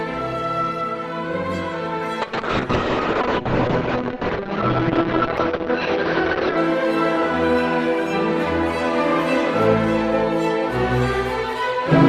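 A call bitrate drop runs from 2.23 s to 6.63 s. The connection's bandwidth estimate collapsed, so the encoder was forced to spend far fewer bits, which fits a fall from 32 kbps to roughly 7 kbps, held for about 4.3 s. With so little data the coding turns coarse and rough, and the top end is sliced away, the audio band shrinking from 20 kHz to 6 kHz and leaving a dull, muffled sound until the rate recovers.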